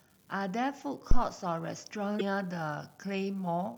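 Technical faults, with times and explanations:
Throughout, unreliable data bit: one marginal data line flips its bit in a random share of samples, so each error adds a spike of identical height. It sounds like a steady fizzy crackle that continues through pauses in the speech. A waveform shows scattered equal-sized spikes, and a spectrogram shows a broadband speckle floor.
1.11 to 1.24 s, phantom power thump: a supply switched on or off on the live input sends a voltage step through the coupling capacitors. The result is a deep thump that dies away in about 28 ms. A waveform shows one large low-frequency swing with a quick tail, and a spectrogram shows a dark low-end blob.
2.16 to 2.21 s, damaged data in a compressed stream: corrupted bytes here make the decoder misread frames and lose sync until it finds the next frame header. This produces a brief glitch. A spectrogram shows a short disturbance that doesn't match the speech around it, with a visible discontinuity in the waveform.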